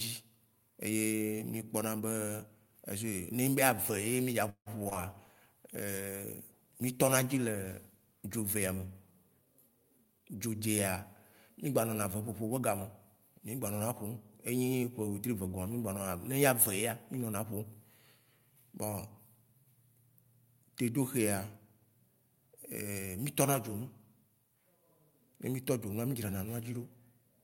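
It's a speech recording with three separate problems bunched into the first ten seconds or so. Right after "mí dza", from about 4.49 to 4.97 s, you get repeated packet loss with that robotic sound: four holes in quick succession, the longest about 168 ms, each patched by stretching out the last bit of audio. Roughly half that half-second is concealment rather than real signal, so it comes out choppy with small pieces just gone. Straight after that, from 5.04 to 8.51 s, there's a call bitrate drop, from 64 down to 28 kbps, sitting at the bottom for about 3.4 s. The bandwidth estimate fell and the encoder was forced to spend far fewer bits, so the speech turns coarser and duller, a bit rough and watery, until the rate climbs back. Then from 9.45 to 10.61 s there's a jitter buffer speed-up. The receiver had built up more buffered audio than it wanted and trimmed it by repeatedly cutting out tiny pitch-period-sized slivers, around 150 ms in total. 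The pitch stays put but the speech plays at about 113% speed, so that stretch sounds noticeably hurried.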